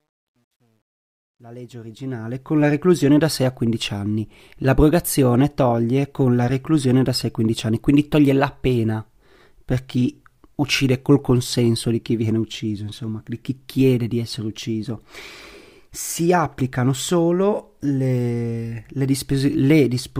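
Truncation distortion on a fade runs from 0.00 to 2.65 s, during the fade-in that ends just before "reclusione da". Without dither, the fade keeps too few bits, which fits about 11-bit resolution, so low levels collapse into coarse steps. The speech sounds gritty, worst from 0.00 to 1.46 s.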